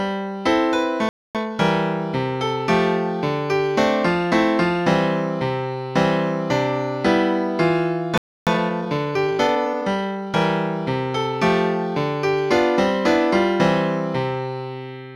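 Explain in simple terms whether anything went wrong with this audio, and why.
Playback stall at 1.09 s and 8.18 s: the sound stops for 0.26 s and then 0.29 s, likely because the player briefly ran out of data.

Time-compressed catch-up at 1.35–1.59 s and 8.47–10.41 s: to recover lost time, the player hurries the sound, first at double speed, then 1.15 times, keeping normal pitch.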